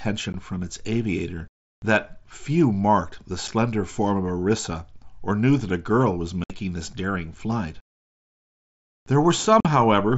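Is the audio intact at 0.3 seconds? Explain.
No. At about 0.33 s there is unconcealed Bluetooth headset packet loss: roughly 15 ms of speech, which fits two lost headset frames on the link to the phone, is simply gone, replaced by silence or an idle pattern with no attempt to fill it. You hear a brief hole with hard edges just before "from its aviator that". A concealed loss would be smoothed over, and the light graininess of the mSBC codec rides on loud sounds rather than being a sudden gap.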